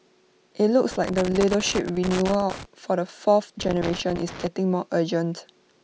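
From 0.91 to 2.65 s, the speech breaks up with loose connector crackle. It returns from 3.60 to 4.47 s. A worn or dirty contact is making and breaking as it shifts. That chops the signal. Each stretch is heard as irregular scratchy crackle.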